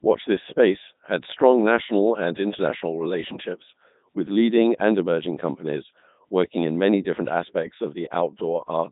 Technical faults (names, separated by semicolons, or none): Codec 2 vocoder